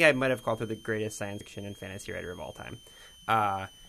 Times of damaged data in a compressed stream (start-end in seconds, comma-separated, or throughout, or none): 1.40